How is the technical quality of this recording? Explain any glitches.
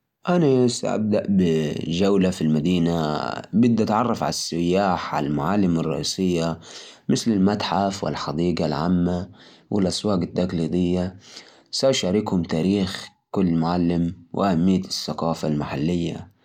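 No technical problems are audible anywhere in the recording.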